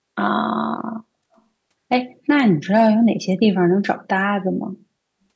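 Echo leak from 1.36 to 1.41 s: a very faint, brief scrap of the voice returns about 275 ms late, likely because the far end's echo canceller let some loudspeaker sound reach its microphone and sent it back down the call.

Hard clipping from 2.30 to 2.40 s: the peaks ran about 2 dB past what one stage could pass, so their tops were sliced flat. The squared-off waveform adds high harmonics, heard as a short crackle on the loudest moments rather than sustained fuzz.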